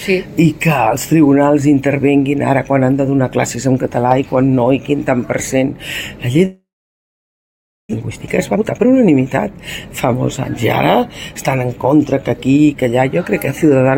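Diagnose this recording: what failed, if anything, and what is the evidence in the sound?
At 6.45 s the audio breaks off into a fading buzz or hiss, then near silence, until 7.95 s. About one second of sound never returns. This is likely a long network dropout, with the receiver's concealment stretching the last sound before giving up.

A jitter buffer speed-up follows, from 7.99 s to 10.65 s. The sound runs 116 percent of normal speed at unchanged pitch and feels hurried. The receiver is cutting short pitch periods to shed roughly 0.4 s of backlog left after the gap.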